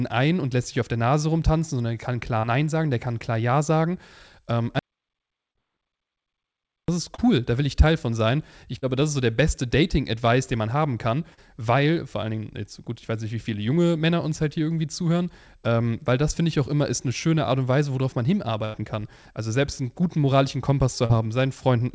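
At 2.40 s the first short concealed packet loss appears. About 40 ms of the call missed the decoder, and the receiver filled roughly 33 ms of it by extending the preceding sound, giving a brief smear before the real audio blends back in.

From 4.79 to 6.88 s an audio dropout to silence removes about 2.1 s. The sound cuts to silence with no room tone, likely from a lost input or failed link, and returns mid-flow at "ist cool da will".

Further 40 ms concealed losses fall at 5.51 s, 7.15 s, 8.78 s just before "das ist so der", and 11.34 s between "den man haben kann" and "weil vor allen". Each is a short smear or wobble.

From 18.65 to 18.77 s a burst of packet loss takes out about 80 ms. The receiver holds the last sound and fades it, a buzz or hiss, then resumes further on with the intervening material gone.

A final short concealed loss sits at 21.06 s. All of this passes through a G.722 call path whose bandwidth stops at 8 kHz.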